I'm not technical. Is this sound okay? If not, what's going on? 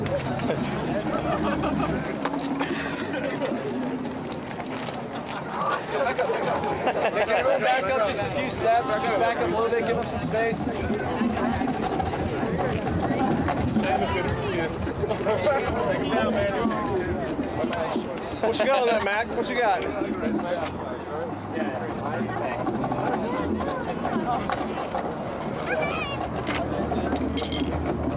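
Yes, no faults to report.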